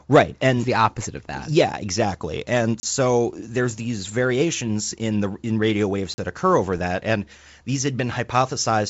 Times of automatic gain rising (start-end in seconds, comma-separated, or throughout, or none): none